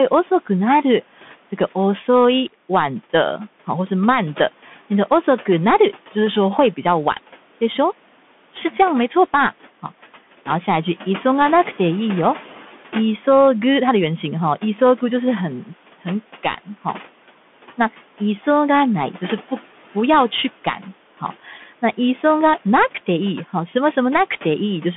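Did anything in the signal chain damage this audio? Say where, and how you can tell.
Yes. At the codec stage there's a Bluetooth CVSD headset codec throughout: sound is band-limited to 200 Hz–3.5 kHz, with granular hiss and scratchy sibilants from its one-bit step coding.

Call processing too: speech cut by the noise suppressor at 21.47–21.63 s, dipping about 7 dB for roughly 100 ms as it mistook speech for background noise.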